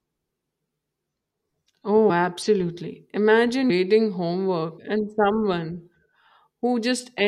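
At 2.09 s the speech jumps forward by roughly 70 ms, and at 3.69 s by around 150 ms. These are compressed frames skipped: whole blocks of encoded audio were never played, either absent from the stream or rejected by the decoder as corrupt. The gaps fit about three and about seven frames of 21.3 ms.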